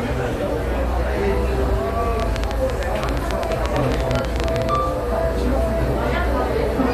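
From 2.20 to 4.76 s, a train of clicks, around thirty at an uneven 11.3 per second, pops well above the sound, likely from electrical interference or a faulty connection.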